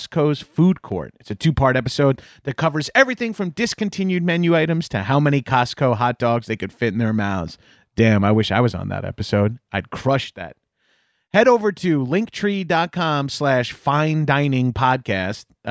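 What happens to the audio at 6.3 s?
Nothing goes wrong at 6.3 s: the speech carries on intact through that moment, with no dropout, click or other fault.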